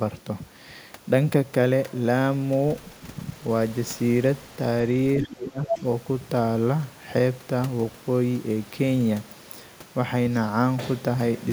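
At 5.21 to 5.32 s a second voice leaks in underneath the speech, a little quieter than the main talker. This is the other side's voice leaking through: the far end is playing from a loudspeaker near the microphone, and the echo canceller has likely left part of it in the signal. It is a separate talker, not a smear or reverb tail of the main voice, which sets it apart from room reverberation.

Starting at 5.22 s and lasting until 5.83 s, the main voice sinks, falling by around 20 dB at its deepest over roughly 0.7 s in all. This is speech suppressed in double talk. With both sides talking, the canceller likely could not tell the local talker from the echo and turned everything down. The level dips and recovers while the far side is still audible.

Inside that dip, from 5.65 to 5.79 s, the far-end voice leaks through again, now about as loud as the suppressed talker. Its brief return comes just as the main voice is pushed down.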